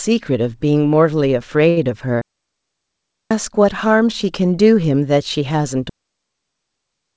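At 1.70 to 1.78 s, a short stall from a late packet holds the speech for 65 ms. The jitter buffer ran dry, so the last sound stretches with a faint buzz or dip. Nothing is lost.

A digital wireless dropout mutes the audio from 2.21 to 3.31 s, and another from 5.89 s runs to the end. Each is a clean, quickly faded hole with no noise burst. The band above 8 kHz is empty throughout, from the call codec.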